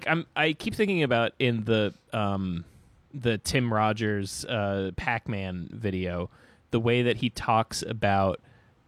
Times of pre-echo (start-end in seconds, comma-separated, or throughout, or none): none